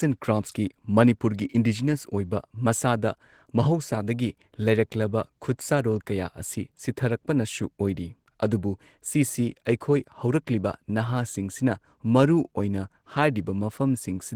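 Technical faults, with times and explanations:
Throughout, Opus voice compression: speech sounds hoarse and slightly robotic, with coarse, smeared highs rather than a band cut, fitting hybrid coding near 16 kbps.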